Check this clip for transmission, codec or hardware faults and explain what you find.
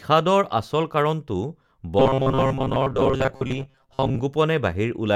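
There's one fault here: robotic sound from repeated short buffers, from 1.99 to 4.2 s. Fresh audio is likely arriving too slowly, so playback keeps looping a roughly 7.5 ms chunk for most of that stretch, stamping a rigid, metallic 133 Hz buzz over the speech.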